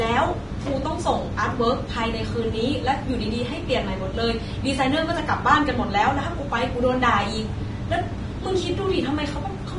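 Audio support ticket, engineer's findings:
Throughout: grainy, hissy treble, nothing above 10.6 kHz; likely heavy Vorbis compression, which fits a bitrate near 30 kbps. Treble detail turns to grain instead of the clean roll-off of a plain low-pass.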